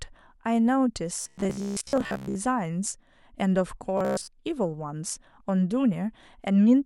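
From 1.21 to 2.35 s and 3.98 to 4.29 s, robotic sound from repeated short buffers gives the speech a rigid metallic 66.8 Hz buzz. This likely comes from a 15 ms buffer being replayed while most of the real audio is skipped. A spectrogram shows flat harmonic stripes spaced 66.8 Hz apart, and the waveform shows identical repeating cycles.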